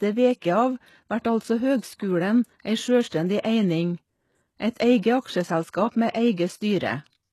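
From start to finish, nothing sounds above 12.3 kHz. The upper treble is synthetic. S sounds turn gritty and lispy. The likely cause is HE-AAC compression, which fakes treble by copying lower bands upward. The plain damage fits a bitrate near 16 kbps.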